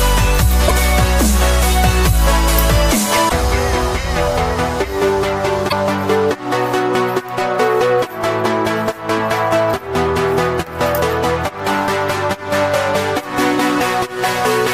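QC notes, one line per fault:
0.67–0.71 s, 3.28–3.32 s, 5.68–5.73 s: broken MP3 bit reservoir, likely. Each 42–44 ms skip spans under two frames, fitting 26 ms MP3 frames borrowing missing data. The waveform shows a jump discontinuity.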